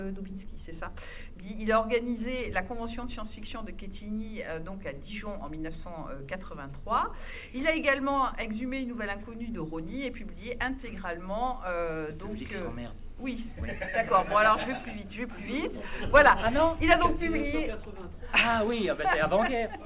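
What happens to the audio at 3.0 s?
Nothing goes wrong at 3.0 s; the audio plays through that moment intact, with no dropout, click, distortion or other fault.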